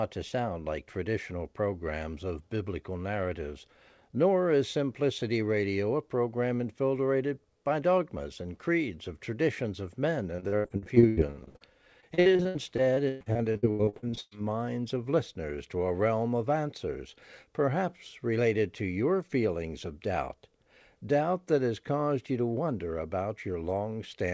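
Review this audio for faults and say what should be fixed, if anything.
Two bursts of repeated packet loss (robotic sound) hit the speech, from 10.36 to 11.62 s right after "of traditions of men" and from 12.00 to 14.33 s leading into "minds of listeners to". Holes up to 81 ms and 118 ms get patched by stretching the last sound, so about 45% and 37% of those spans are concealment, which is what sounds choppy. Fixing the network path or giving the jitter buffer more headroom, perhaps with FEC, would stop it.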